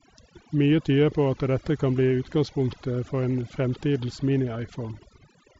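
Speech, carrying overdone noise removal from start to finish: a noise reduction stage was set far too aggressively for the background level, so any frequency band that dips near its noise estimate is pulled down or gated off outright. The background drops and breaks up into twinkling specks, and the quieter components of the voice are stripped along with it. The band tops out around 7.7 kHz, consistent with a wideband Bluetooth headset link using mSBC.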